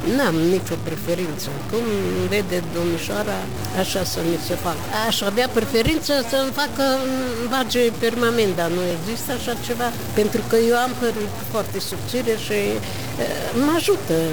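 From start to finish the sound carries a harsh, buzzy distortion that points to a stuck bit, likely from a faulty converter or data line holding one bit fixed. Roughly half the samples are pushed off by that bit's weight, a step of about -30 dBFS, following the waveform's shape. Unlike clipping, which only bites on peaks, or coarse quantisation, which fades with the signal, this fault fills quiet gaps with a steady noise floor.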